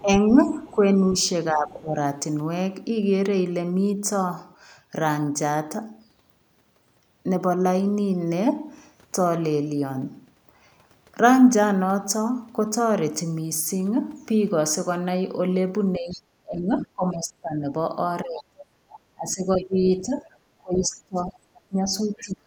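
From 0.0 to 0.75 s a faint second voice sits far beneath the talker, roughly 30 dB down. This is the other side's voice leaking through, likely because the echo canceller left some of the loudspeaker sound in the microphone signal.

Overlapping it, from 0.02 to 1.97 s, the talker's level sags in patches adding up to about a second, dropping by as much as about 10 dB. This is speech suppressed in double talk, likely the canceller turning everything down while both sides spoke at once.

The same suppression returns from 15.98 s to the end, deeper at around 25 dB and covering about four seconds in all. The leaking second voice comes back within it, as a brief scrap at 16.12 to 16.22 s and then a longer stretch from 18.38 to 22.28 s, both about 20 dB below the talker. Each is likely residual echo the canceller failed to remove.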